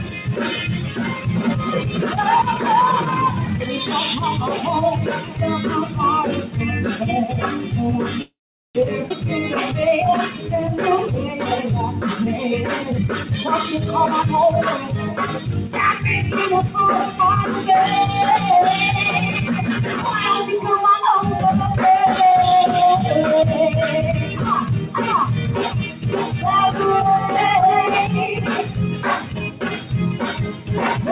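A noise suppressor meant for speech stays active throughout, treating steady content and tails as noise. Gain swings of roughly 10 dB make held sound pump and thin while attacks get through. The path's band stops at 4 kHz, which fits a G.711 mu-law call link.

From 0.00 to 0.31 s, the suppressor cuts sound it takes for noise by about 6 dB, so that stretch sinks below its surroundings. It does the same at 5.20 to 5.38 s, again by about 6 dB.

From 8.22 to 8.77 s there is a call audio freeze, likely from packets held up until the jitter buffer ran empty. A brief continuation fades into about 410 ms of silence, and playback then resumes where it stopped with nothing lost.

Between 9.09 and 9.12 s the audio skips ahead. Roughly 200 ms was dropped while later audio was waiting, so the two sides join almost directly.

From 9.74 to 12.85 s, a jitter buffer slow-down repeats short pitch-period pieces to rebuild reserve. 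It adds 159 ms, and the sound runs at 95% speed with unchanged pitch, slightly drawn out.

Jitter buffer speed-up then trims excess delay by removing short pieces. From 12.90 to 13.72 s it runs at 142% and removes roughly 400 ms, so it is clearly hurried. From 14.16 to 15.99 s it runs at 105% and removes roughly 100 ms. From 16.52 to 17.29 s it runs at 105% and removes roughly 40 ms, a loss of steady timing.

The suppressor again cuts sound at 25.91 to 26.06 s by about 6 dB and at 29.21 to 29.91 s by about 7 dB. It cuts once more at 30.46 to 30.69 s by about 6 dB, each time dropping the sound or shortening its decay.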